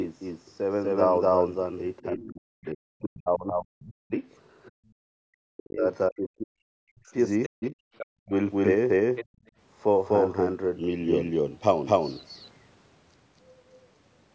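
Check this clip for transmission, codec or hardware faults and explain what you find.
The clip is speech and has four kinds of fault. A doubled audio track runs through all of it. There are two stretches of speech suppressed in double talk, four bursts of the other side's voice leaking through, and two brief drops where the background is gated by the echo canceller.

Doubled audio track: A second copy of the speech sits under the first for the whole clip. It trails by roughly a third of a second and is about as loud as the original. It has no reverb tail and no room colour, so it sounds like a clean slapback repeat, not an echo in a space. The likely cause is the same signal being captured twice, once through a slower path.

Speech suppressed in double talk: From 2.01 to 4.12 s and from 5.08 to 8.31 s, the talker's voice dips hard in places, by as much as around 40 dB. About two seconds of the first stretch is affected, and about one and a half seconds of the second. 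This likely happens because both sides spoke at once. The echo canceller could not tell the local voice from the loudspeaker echo, so it turned both down.

Other side's voice leaking through: A second voice appears at 2.64 to 2.68 s and at 4.66 to 4.91 s. In those two places it is very faint, far below the main speech. It returns at 7.43 to 8.06 s and at 9.16 to 9.5 s. There it is much louder, about 10 to 15 dB under the talker. The likely cause is the far end playing on a loudspeaker, and the canceller not removing all of it from the microphone.

Background gated by the echo canceller: The room sound drops out at 4.71 to 4.80 s, by about 40 dB. It drops again at 9.25 to 9.46 s, by about 34 dB. Each drop lasts only a moment, then the room sound snaps back. Both land inside the leakage bursts at 4.66 and 9.16 s. While the loudspeaker played, the canceller clamped the microphone hard. It released a moment later.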